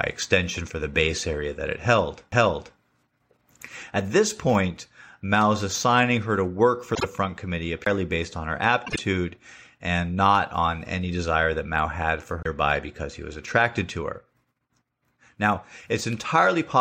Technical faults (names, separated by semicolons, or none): CD skip; frames out of order